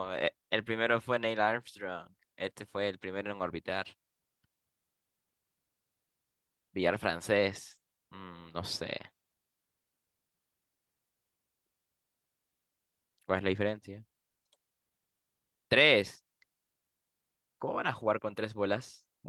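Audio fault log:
There is no fault in this speech audio.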